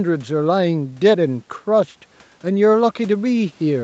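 Nothing in this speech recording stood out as a fault on listening.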